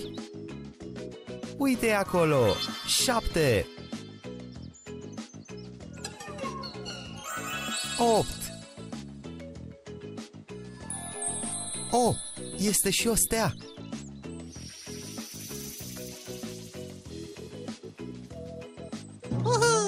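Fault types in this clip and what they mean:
MP2 compression: throughout, the sound is dull, with a gurgling, grainy roughness and upper frequencies that drop in and out. This is likely MPEG Layer II coding starved of bits, which fits roughly 80 kbps, shutting off upper sub-bands and quantising the remaining ones coarsely.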